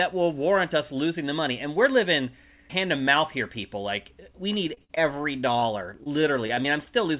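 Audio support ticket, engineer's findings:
Repeated packet loss (robotic sound), 4.74–5.64 s. Choppy speech with short holes, the longest about 47 ms. Jitter buffer concealment repeats the last sound into each hole. About 15% of the span is patched.

Same fault, 6.04–6.88 s. Choppy stretch with holes up to about 21 ms. About 12% is concealed. Band stops at 4 kHz, which fits a G.711 A-law call path.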